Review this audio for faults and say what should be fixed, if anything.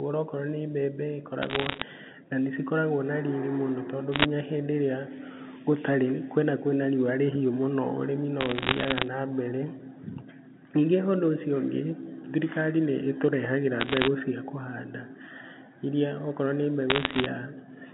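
Bit errors on a digital phone line put bursts of sharp ticks and crackle over the speech at 1.42–1.82 s, 4.13–4.26 s, 8.41–9.03 s, 13.80–14.08 s and 16.90–17.26 s. At an error rate of roughly one bit in a hundred (about 0.7% in the 8.41–9.03 s burst), each flipped bit corrupts a single mu-law sample. A hit on the sign bit or a high-order bit throws that sample far from its true value. In the waveform these show as isolated one-sample spikes, and on a spectrogram as thin vertical broadband lines within each burst, while the 150 Hz to 3.6 kHz telephone band stays intact around them.

To prevent this, find and fix the source of transmission errors on the digital line, such as faulty cabling, interference or clock slips, or carry the audio over a link with error detection and correction.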